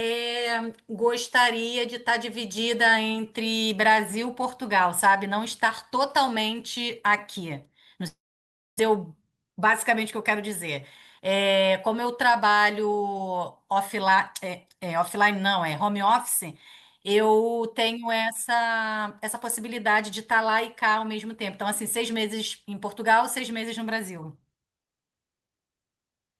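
From 8.07 to 8.81 s the speech trails off into a fading buzz, then goes quiet, likely a long network dropout that lost about 0.6 s. Right after, from 8.89 to 10.31 s, there's a jitter buffer speed-up: the speech runs about 6% fast at unchanged pitch while roughly a tenth of a second of backlog gets trimmed out.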